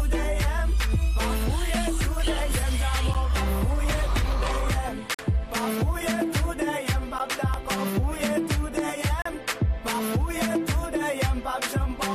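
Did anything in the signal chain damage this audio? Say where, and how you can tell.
Yes. Hard-edged holes of silence cut into the sound at 3.14 s, 5.14 to 5.19 s, 7.19 s and 9.22 to 9.26 s, lasting about 11, 44, 14 and 36 ms, roughly every 2 s. These are gaps between stream segments at playback: segment timestamps leave small holes that the player fills with silence, though no audio is lost.

Two sharp single pops, about 10 dB above the sound, sit on top of it at 7.54 to 7.56 s and 8.79 to 8.81 s while the audio continues underneath. These loud pops likely come from a voltage step in the analogue wiring or a driver glitch, shaped by the following circuitry.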